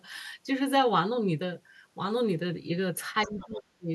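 A speech clip in which, from 3.22 to 3.45 s, a faint second voice sits well below the main talker. This is the other side's voice leaking through, likely sound from the talker's loudspeaker that the echo canceller failed to remove from the microphone. Unlike a person speaking in the room, this voice appears only as a short scrap. From 3.26 to 3.91 s, overlapping that leak, the talker's own voice drops very deeply, close to vanishing, for most of the final stretch of the clip. This is speech suppressed in double talk, likely the echo canceller treating both voices as echo while they overlapped and turning everything down. Unlike a network dropout, the loss starts just as the leaked voice appears and reaches a deep attenuation, where a dropout would be an abrupt gap with no trigger.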